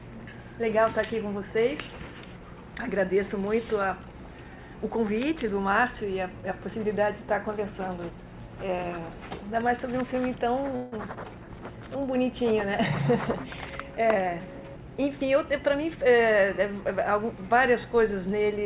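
Audio carried over a narrowband call path, with nothing above 4 kHz, that fits G.711 A-law at 64 kbps. From 10.76 to 10.95 s there is a call audio freeze: the last sound hangs as a fading buzz for 161 ms before the audio resumes intact, likely because delayed packets drained the jitter buffer. From 13.99 to 15.59 s a jitter buffer speed-up makes the sound run about 10% fast at unchanged pitch as the receiver trims short pitch-period slices, about 150 ms in total, to reduce the built-up delay.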